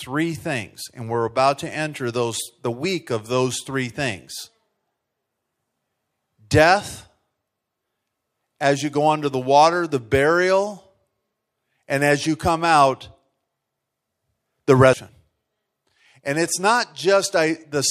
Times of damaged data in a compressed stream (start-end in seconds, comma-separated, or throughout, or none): 14.93